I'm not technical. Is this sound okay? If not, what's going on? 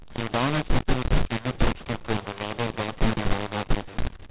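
No. The speech sounds harsh and gritty all the way through, with hiss in the pauses. This is mu-law and A-law mixed up: telephone audio saved in mu-law was played back as A-law, scrambling its loudness levels.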